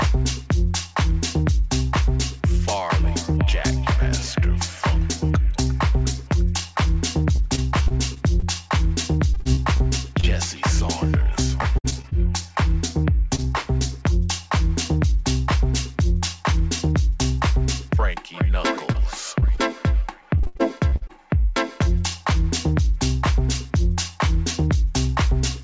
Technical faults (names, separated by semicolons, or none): repeated packet loss (robotic sound); short concealed packet loss